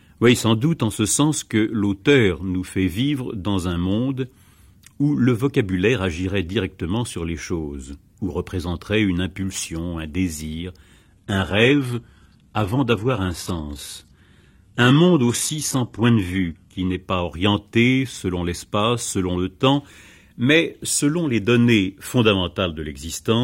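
Adaptive stream at a lower bitrate from 11.02 to 17.02 s in this speech: quality drops abruptly with no gap, nothing survives above 12.3 kHz and the treble turns synthetic. This fits the player switching to a low-rate HE-AAC rendition, around 16 kbit/s, while the connection slowed.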